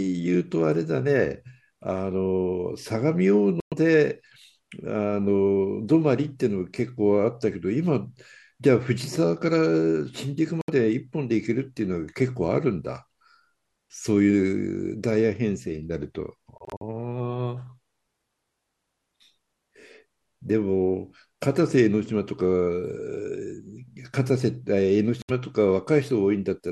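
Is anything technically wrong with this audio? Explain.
Yes. Speech briefly cuts to silence at 3.60–3.74 s, 10.61–10.70 s, 16.58–16.82 s and 25.22–25.31 s. Each is likely a Bluetooth dropout, where late packets were discarded. The edges are abrupt or fade over a few milliseconds. Speech resumes further on, as if it had kept playing. The 16.58 s gap is broken into short holes, the longest about 46 ms.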